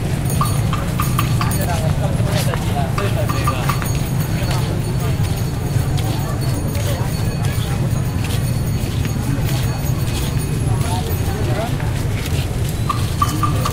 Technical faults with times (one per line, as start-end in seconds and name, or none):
1.62-1.64 Bluetooth stutter